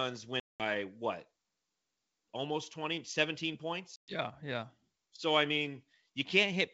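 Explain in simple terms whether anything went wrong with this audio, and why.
Packet loss on an ADPCM call cuts the sound at 0.40 s for about 200 ms and at 3.96 s for about 120 ms. Each gap falls silent, then the decoder is briefly out of step with the sender.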